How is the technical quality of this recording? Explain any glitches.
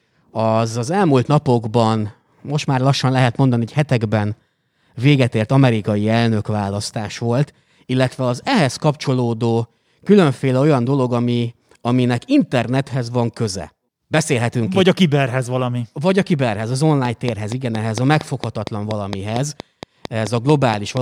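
The recording has one clear fault near the end. From 17.05 to 20.98 s, just after "a kiberhez az", a train of clicks appears: about twenty similar pulses at a regular 4.3 per second, peaking roughly 10 dB above the speech. The cause is likely interference or a faulty connection or power supply, and the clicks are heard as steady ticking over the speech and pauses.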